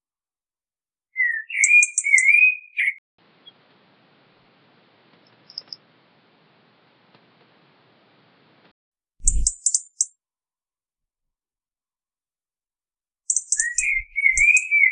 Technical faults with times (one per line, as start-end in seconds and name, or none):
2.98-8.91 input switched to a poorer device